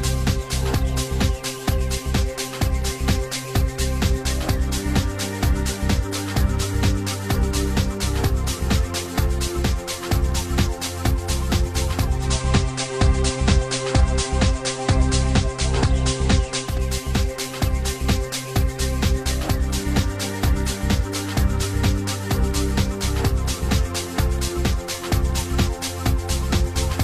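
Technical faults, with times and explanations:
12.10–16.80 s, digital radio blending to analogue: a faint hiss rises around 30 dB below the signal, and the level shifts by about 2 dB, each change easing in over 200 ms. The hybrid receiver lost its digital stream and cross-faded to the FM broadcast of the same station, whose analogue noise comes through until it blends back to digital.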